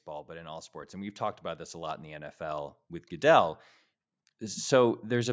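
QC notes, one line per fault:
0.05 to 3.63 s, automatic gain rising: the level climbs steadily by about 8 dB over roughly three and a half seconds as the gain control, judging the input too quiet, keeps turning it up. Speech and background noise swell together, which separates this from a speaker simply getting louder. The slow, one-way ramp also sets it apart from compressor pumping, which dips and recovers with each loud syllable.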